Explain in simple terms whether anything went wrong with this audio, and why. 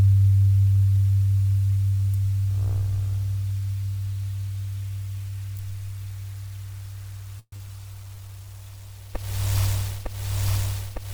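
A long network dropout, from 7.39 to 7.61 s: the sound turns into a fading buzz, falls silent briefly, then resumes with a short piece missing. The likely cause is audio that never arrived, so the receiver stretched the last sound to cover the gap before giving up.

A jitter buffer slow-down, from 8.03 to 8.46 s: the sound plays at about 83% speed without changing pitch, gaining roughly 80 ms. The receiver repeated tiny slices of sound to rebuild its safety reserve of waiting audio after the gap.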